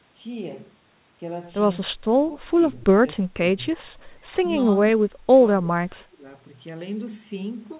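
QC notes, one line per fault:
1.89–2.16 s, 2.37–2.61 s, 2.87–3.77 s, 4.98–5.42 s and 5.61–6.26 s: speech suppressed in double talk. The speech sinks by about 15 to 25 dB, deepest in the last two runs. The likely cause is an echo canceller that mistook the talker for loudspeaker echo while the far side spoke, and turned both down.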